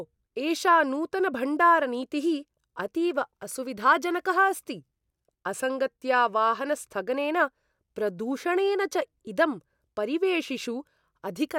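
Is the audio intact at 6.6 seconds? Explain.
Yes, the speech at 6.6 seconds is intact, with no dropout, click, distortion or other fault at that moment.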